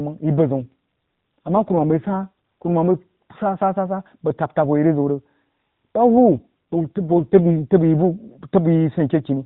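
From 0.55 to 2.70 s and again from 6.17 to 7.54 s, the speech turns rougher and buzzier with no gap or band change. This is an AMR rate drop within the narrowband mobile codec, consistent with a switch from 12.2 to roughly 5.9 kbps.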